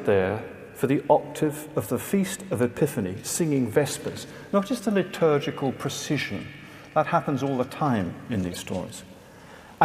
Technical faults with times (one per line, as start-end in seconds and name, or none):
8.52-8.57 corrupt frame decoded